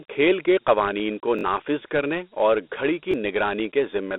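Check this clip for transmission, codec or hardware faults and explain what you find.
Two faults are audible. Throughout, the speech sounds narrow and gritty, with hiss trailing it and nothing above about 3.9 kHz. This is Dialogic VOX ADPCM: coarse 4-bit coding at 32 kbps confined to a 250 Hz to 3.6 kHz band.

From 1.39 to 1.43 s, between "قوانین کو" and "کرنے اور", a tiny fragment stutters two extra times with hard joins. At 3.12 to 3.14 s it repeats once. These are repeated buffers: audio arrived late, so the device replayed its last 21 ms block, which fits a 1024-sample buffer.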